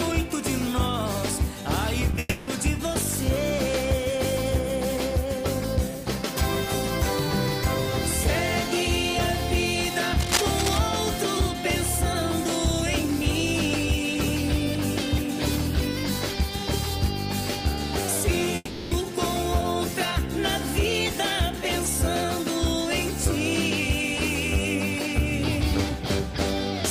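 At 2.11 s there's a quick bit of short concealed packet loss. About 20 ms of audio didn't arrive in time, and the decoder patched the hole by stretching the last sound forward, so you get a tiny smear or wobble before it blends back in.

Right after, from 2.19 to 2.49 s, the sound turns into a fading continuation of the last sound for about 280 ms and picks up again further on with that stretch missing. That's a long network dropout, likely: the receiver kept extending the last sound because nothing new was coming in. The same thing happens from 18.55 to 18.93 s. This time about 360 ms is filled, and there's roughly 10 ms of silence before the real audio returns.

From 10.20 to 10.79 s there's a burst of uneven scratching and rustling, fairly loud, only a little below the sound itself. That's cable scratch noise, probably a worn cable or connector being moved so its contact resistance flickers.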